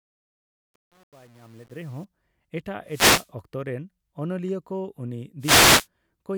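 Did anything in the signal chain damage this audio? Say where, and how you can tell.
Yes. The fade-in over the first 2.05 s shows truncation distortion, worst from 0.0 to 1.85 s. While the level is still low it comes out gritty instead of rising cleanly. That fits a gain stage with no dither keeping only about 8 bits, so the quiet part of the fade collapses into a few coarse steps. It's a sample-format or volume-processing fault.

Two wireless microphone noise hits show up, at 2.87 to 3.30 s and 5.40 to 5.87 s. Each is a short swish of static that lasts under half a second and then clears. That points to the analogue FM radio link ahead of the converter. The received signal dipped as reflections cancelled, and the receiver's noise came up through the audio until the signal recovered.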